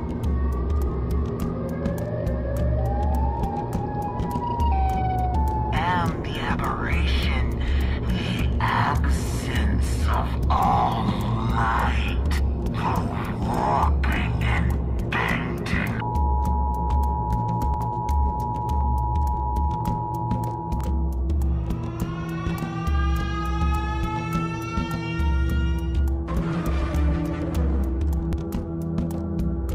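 At 10.59, 17.74, 20.81, 26.94 and 28.33 s the sound jumps forward, and nothing fades or falls silent in between. It's skipping about a tenth of a second at the first two, roughly two tenths at 20.81 and 28.33, and around three tenths at 26.94. That pattern is likely a dropped buffer (overrun): the software didn't collect its samples in time, so they were overwritten and the surviving ends got spliced straight together.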